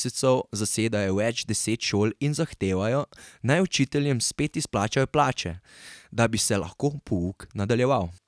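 Nothing stood out on listening to this recording of speech.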